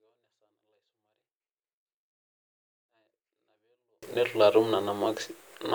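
From the start to 4.03 s the speech is almost inaudible, a 24-bit alignment error (too quiet): samples held in the low 24 bits of each 32-bit word are being read as full 32-bit integers, so every value sits roughly 48 dB below where it belongs. The sound stays clean but faint. On a waveform that stretch is a near-flat line, and a spectrogram shows the same speech pattern, intact but dimmed, before normal level returns.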